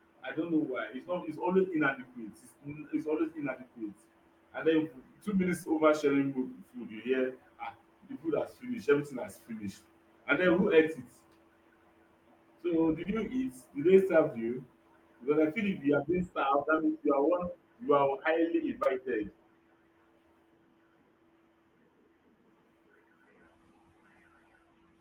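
At 5.63 to 5.67 s, 13.03 to 13.07 s, 14.45 to 14.50 s, 16.76 to 16.79 s and 18.83 to 18.87 s the speech shows short concealed packet loss. Each time about 20 ms of audio failed to arrive, and the receiver bridged the hole by extending the preceding sound before blending back in. What you hear is a brief smear or wobble, not silence. That is what separates it from an unconcealed dropout, which would leave an abrupt gap or hard click.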